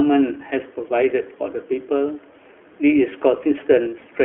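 The iLBC codec shapes the speech from start to finish. Its line band runs from 250 Hz to 3.7 kHz, so the top is dull and the bottom thin. Each 20 ms frame is coded alone, leaving a plainly rough, synthetic edge, which fits the 15.2 kbps mode. The room noise, about 52 dB below the speech, sits faintly underneath.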